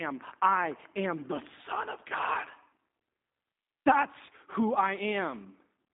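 G.729 codec damage throughout: speech is rebuilt from a vocal tract model and sparse pulses, so it sounds rough and synthetic, with nothing above 3.8 kHz.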